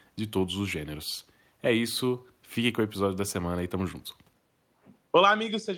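No technical faults can be heard anywhere in the speech recording, which keeps a steady, unbroken signal throughout.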